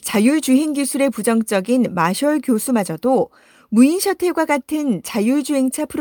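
No technical faults are audible anywhere in the speech.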